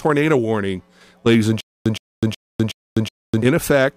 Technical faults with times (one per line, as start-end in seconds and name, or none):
1.61-3.42 stutter with silent gaps